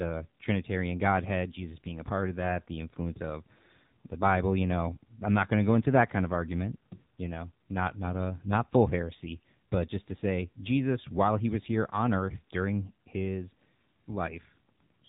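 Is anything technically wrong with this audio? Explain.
Yes. AMR narrowband mobile codec throughout the clip: the speech went through a low-rate phone coder that rebuilds it from a vocal-tract model fed by sparse pulses. The plainly buzzy, synthetic edge fits about 7.4 kbps, and nothing above 3.8 kHz survives, leaving a muffled telephone sound.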